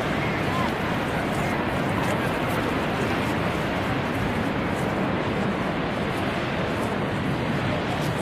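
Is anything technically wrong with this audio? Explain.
Yes. From 5.11 s to the end at 8.2 s the audio drops to a lower-bitrate version of an adaptive stream. The switch is abrupt but seamless: the top end thins, with nothing above about 14.9 kHz, and the highs take on a synthetic, swirly texture typical of spectral band replication, which fits a move to a low-rate HE-AAC stream. Unlike a buffering stall or dropout, there's no silence or gap, only a sudden step down in quality.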